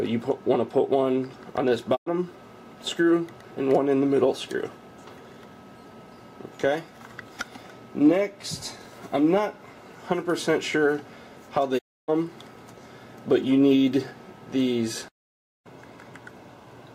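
At 1.95 s the sound fades out over about 20 ms and goes silent until 2.08 s, and at 11.77 s it does the same until 12.10 s, the longer hole. Both are digital broadcast dropouts: the receiver stopped getting valid frames and muted until good data returned. The gaps fit roughly three and nine lost frames, and that audio is gone. On a waveform each shows a short taper to a flat line; a spectrogram shows a clean vertical blank band.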